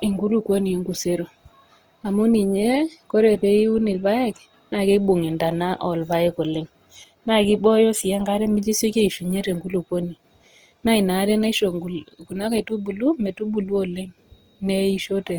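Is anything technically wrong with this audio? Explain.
Yes, there's Opus compression damage throughout the speech, likely from Opus's music mode at something like 24 kbps, with bands filled by folding or noise, leaving tones grainy and rough.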